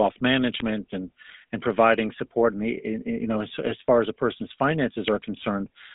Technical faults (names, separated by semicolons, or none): GSM full-rate codec; GSM bit errors